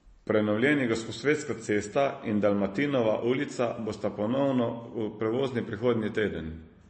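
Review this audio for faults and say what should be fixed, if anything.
Throughout, the speech sounds watery, likely from MP3 compression at a rate fitting 32 kbps. A spectrogram shows a hard ceiling at 8.3 kHz and flickering gaps below it. Keep a lossless master and encode at a higher bitrate.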